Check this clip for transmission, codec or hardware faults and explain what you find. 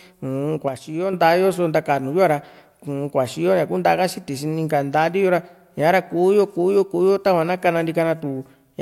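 A sudden gain jump runs from 0.68 s to 1.13 s. At 0.68 s the level of the speech drops by about 6 dB in a single step, with no fade, and it stays at that lower level until 1.13 s, when it snaps back up just as abruptly. The background noise drops and returns with the speech. This is likely a digital gain setting or bit shift applied instantly instead of being ramped in and out.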